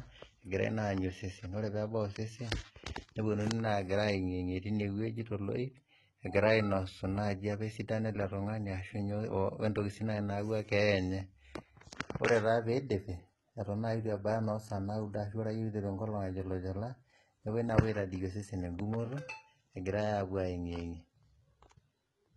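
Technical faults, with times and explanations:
Throughout: HE-AAC compression. The speech has a bright but synthetic top end. S sounds turn gritty and lispy. The likely cause is heavy coding that copies lower bands upward to fake the treble. The damage fits HE-AAC v2 at around 16 kbps.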